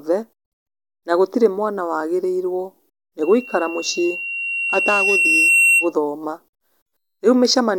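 Right after "gũtirĩ mwana wagĩrĩirwo nĩ", at 3.22 s, a loudspeaker feedback squeal kicks in: the mic is hearing its own speaker, and a 2.7 kHz tone runs away, swelling over roughly two seconds to sit about 5 dB above the speech before it stops at 5.93 s.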